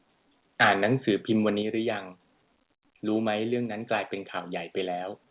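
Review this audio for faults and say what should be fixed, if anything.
Microphone overload is heard from 0.6 to 1.1 s and again from 1.47 to 1.49 s. The peaks run about 14 dB and about 1 dB past the converter's limit. Their tops are flattened, and a harsh crackle rides on the loudest parts. The likely cause is an input gain set too high for the converter. Lowering the input gain before the call prevents it.

Microphone volume stepped down is heard at 0.63, 1.62 and 3.66 s. The level falls abruptly by about 3, 5 and 2 dB. Sound and background drop together, and the first two drops follow the distorted peaks closely. Each is a single step. This points to the call software cutting the device's input volume after detecting overload. A sensible fixed input level prevents these automatic cuts.

The call path audibly stops at 4 kHz, which fits a narrowband G.711 codec.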